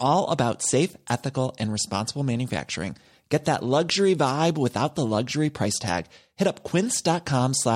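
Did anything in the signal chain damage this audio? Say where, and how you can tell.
No, none of the stages between capture and playback left a mark on this speech. Nothing I can hear points to any step in the chain altering the signal.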